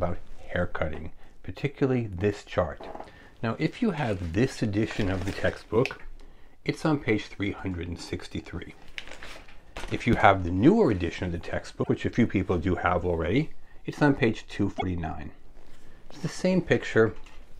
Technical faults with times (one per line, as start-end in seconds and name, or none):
11.82-11.89 broken MP3 bit reservoir
12.14 DC step
14.77-14.83 broken MP3 bit reservoir